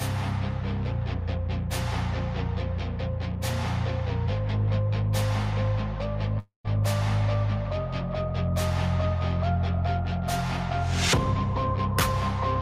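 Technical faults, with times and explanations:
6.39–6.66 s, long network dropout: the last sound stretches into a fading buzz for about 250 ms, sinks to near-silence, then resumes with roughly 260 ms of audio missing. This is likely a receiver concealing lost packets until real audio arrived again.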